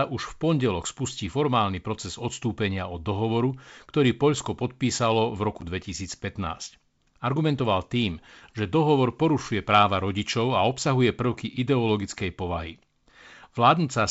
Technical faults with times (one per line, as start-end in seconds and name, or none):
5.61-5.64 packet loss on an ADPCM call